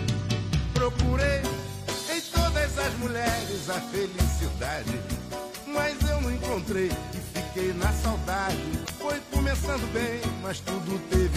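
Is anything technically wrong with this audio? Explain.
Yes, there's one glitch. From about 8.82 to 8.90 s there's damaged data in the compressed stream: a short run of corrupted bytes trips up the decoder, which loses sync and hunts for the next valid frame, so you get a brief glitch in the sound.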